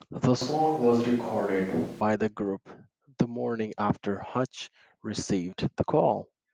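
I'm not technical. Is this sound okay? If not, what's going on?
No, not quite. From about 0.42 to 2.01 seconds the voice suddenly turns roomy and hollow, with less body in the low end, starting just as "the group the morning" is said, then snaps back. That's a switch to a distant microphone: the close mic likely dropped out and a mic further away, like one on a camera, covered that stretch. The volume stays about the same, but a little more room and background sound creeps in.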